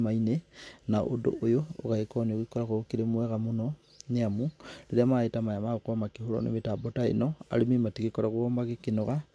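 Nothing stood out on listening to this speech recording.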